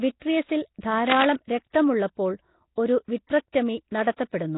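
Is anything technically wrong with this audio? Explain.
Yes. The speech has heavy codec damage throughout, which likely comes from Nellymoser compression. Every block is coded with too few bits, so weak bands are replaced by noise. The result is a rough, hissy, underwater smear that points to a low bitrate around 16 kbps. A spectrogram shows nothing above 3.8 kHz and grainy, blotchy noise where the fine harmonic detail should be.

Pre-echo occurs at 0.81 s, 1.70 s, 3.27 s and 4.16 s, with spreads of 26, 40, 31 and 20 ms. Quantisation noise meant for a sharp attack spills into the quiet stretch before it, so each onset is preceded by a brief hiss and sounds softened. On a spectrogram, a faint broadband smudge leads each onset. On a waveform, the low-level fuzz begins before the attack.

Cable scratch noise runs from 1.09 to 1.25 s, at roughly the same level as the speech. The likely cause is a worn cable or connector whose contact resistance fluctuated as it moved. 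It sounds like a burst of scratching or rustling. A spectrogram shows dense, irregular broadband specks, and the waveform shows jagged spikes over that stretch.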